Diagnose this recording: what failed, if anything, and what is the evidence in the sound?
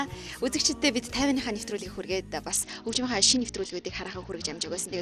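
The failure sits at the codec stage on the wireless link: a Bluetooth SBC bit pool drop starting at 2.51 s and lasting to the end. From that point the treble dulls and a gritty, granular noise rises under the sound. The encoder was starved of bits, likely from link congestion, so the top sub-bands received few or none and the remainder were coarsely quantised, which fits a bit pool falling from around 28 to 8, roughly 72 kbps. A spectrogram would show the upper bands abruptly thinning or vanishing at 2.51 s, with speckled noise filling the lower bands.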